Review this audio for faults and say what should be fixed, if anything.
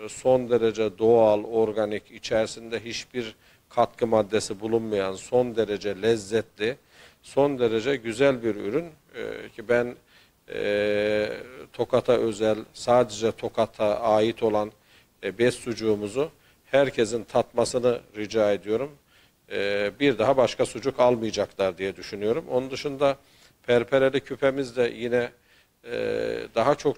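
No faults can be heard anywhere in the audio. Nothing here needs to be fixed.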